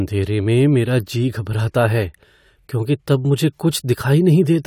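A short speech recording, and nothing is technically wrong with it.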